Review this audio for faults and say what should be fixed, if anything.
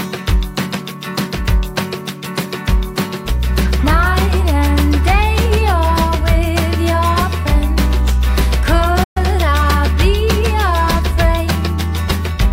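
A playback stall occurs at 9.03 s and lasts until 9.17 s. The player most likely ran short of data, or its playback thread was held up, so it had nothing to send to the output. The sound cuts off abruptly mid-flow, leaving a hole of about 120 ms, and then resumes. The break in continuity is clearly audible.

To prevent it, give the player a deeper buffer and run its audio thread at high priority so other work cannot block it.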